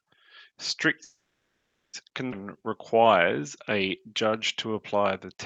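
From 1.03 to 1.95 s the sound stops and a brief buzzing continuation of the last sound fades into about 0.79 s of silence, then resumes exactly where it left off. This call audio freeze likely came from delayed packets draining the jitter buffer, inserting a 0.9 s gap without losing anything.

At 2.31 to 2.34 s there is a skip ahead: playback jumps forward with only a 10 ms join, and roughly half a second of speech is gone, the two sides butted together almost directly.

Two jitter buffer slow-down passages follow, 2.45 to 3.42 s and 4.00 to 5.36 s, where speech drags at unchanged pitch, running at 94% and 93% speed. The buffer was rebuilding its reserve by repeating pitch periods, stretching these stretches by 69 ms and 102 ms. Throughout, the Opus call path limits the top end to about 8 kHz.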